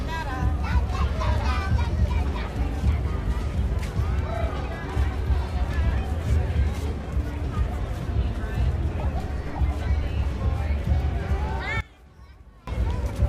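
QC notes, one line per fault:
11.81 to 12.67 s, one channel inverted: the sound drops by about 21 dB to a faint copy. The likely cause is one stereo channel flipping polarity. Content shared by both channels cancels in a mono sum, leaving only their faint difference.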